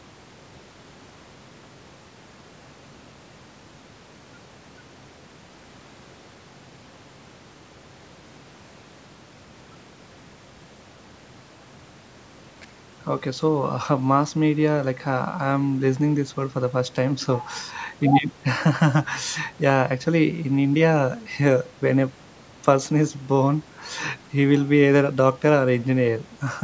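Nothing stood out on listening to this speech, which carries the ordinary bass trim and 8 kHz top end of call microphone processing.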